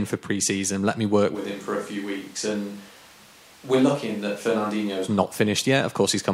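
A likely switch to a distant microphone from 1.37 to 5.05 s abruptly makes the speech roomy and thin, a few decibels quieter, over more room noise.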